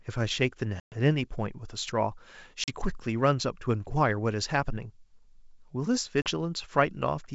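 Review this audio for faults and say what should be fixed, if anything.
Packet loss on the ADPCM call hits at 0.80, 2.64 and 6.22 s, with about 120 ms of silence, then 40 ms twice, over the G.722 wideband link. After each gap the decoder's predictor and step size are out of step with the sender's, so speech returns slightly distorted until it settles. Adding jitter buffering with packet-loss concealment and decoder state resets would fix this.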